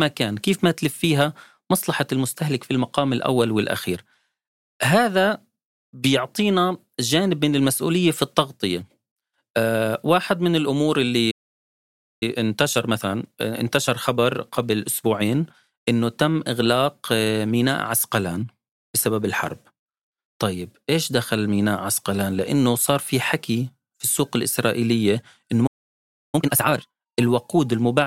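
A playback stall at 11.31 s cuts the speech dead for about 0.9 s, until 12.23 s. The player most likely ran short of data or had its output thread held up, so nothing reached the output until it recovered. Time-compressed catch-up follows from 12.23 to 15.23 s. The player cuts and cross-fades small slices to clear the backlog, running the speech about 1.1 times fast at unchanged pitch. A second playback stall at 25.66 s silences the speech for about 0.67 s, until 26.35 s. Time-compressed catch-up from 26.35 to 27.01 s is far more aggressive at 2.0 times speed, so that stretch sounds rushed.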